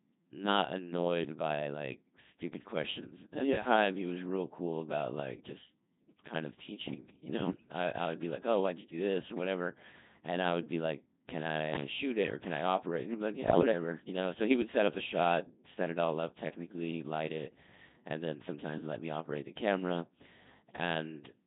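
Codec 2 vocoder runs through the whole clip. Only pitch, voicing, energy and a spectral envelope survive, and the decoder rebuilds the speech from sine waves. The result is heavily robotic and buzzy, in the 2.4 kbit/s mode.

Bit errors on digital voice radio strike from 7.48 to 7.72 s, just before "I I would be", and again from 13.48 to 13.72 s, between "he'd be like" and "you know". Corrupted bits scramble frame parameters across roughly a quarter second, about eight frames each time. Pitch, level and timbre lurch into warbling, bleepy gibberish, at error rates around 5 and 7 percent.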